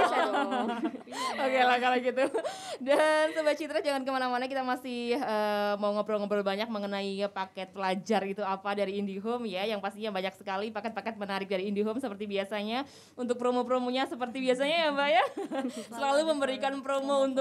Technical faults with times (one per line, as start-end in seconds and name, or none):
none